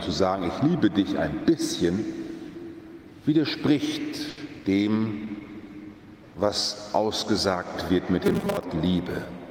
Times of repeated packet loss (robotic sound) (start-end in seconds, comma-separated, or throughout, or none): 4.29-4.66